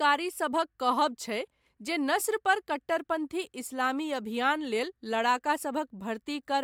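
No technical faults can be heard in the speech, so there is nothing to describe in time order.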